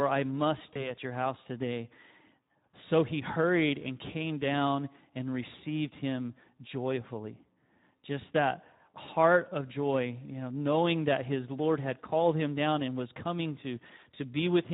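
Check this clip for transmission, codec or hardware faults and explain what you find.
Two kinds of fault are present: Speex codec coding throughout, and two bursts of VoIP packet loss concealed by the speech codec.

Across the whole clip, the Speex codec is running at a low setting, with its damage plainly audible and fitting a rate of about 11 kbps. With few bits for the excitation, the speech comes out noisy and hoarse.

At 0.74 to 0.90 s and again at 9.05 to 9.09 s, VoIP packet loss concealed by the speech codec occurs. Each gap points to a single lost 20 ms frame. The decoder extends its last pitch and filter with falling gain, so speech smears into a fading buzzy tone or coloured noise.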